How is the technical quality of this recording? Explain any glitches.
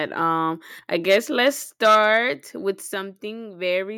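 The recording has two related problems in its first three seconds: harsh, distorted speech peaks, and sudden small drops in loudness.

Microphone overload: the loudest speech between 1.10 and 1.17 s, again at 1.46 to 1.48 s, and over a longer stretch from 1.84 to 2.17 s has a gritty, crackly edge. The likely cause is an input volume set too high. Peaks that would have been about 5, 2 and 6 dB above the converter's maximum have their tops sheared flat. In the first burst roughly a tenth of the samples are clipped, and somewhat fewer in the later two. The squared-off waveform adds the rough distortion.

Microphone volume stepped down: the whole signal, speech and background alike, drops abruptly in level at 1.02 s by about 2 dB, at 1.95 s by about 3 dB, and at 2.94 s by about 4 dB. Each drop is a single step rather than a fade. This is likely the call software's automatic gain control reacting to the loud, clipping input by lowering the microphone volume, and the second step comes in the middle of the longest overloaded stretch.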